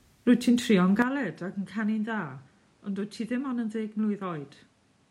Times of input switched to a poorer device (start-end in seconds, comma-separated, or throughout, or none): 1.02-5.11